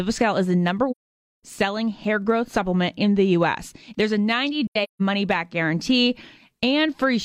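AAC frame loss with muting from 0.91 to 1.43 s, after "is the number", then scattered between 4.67 and 5.01 s, before "back guarantee". The decoder zeroed the missing frames, leaving soft-edged silent holes: about 0.5 s first, then short dropouts of up to roughly 150 ms.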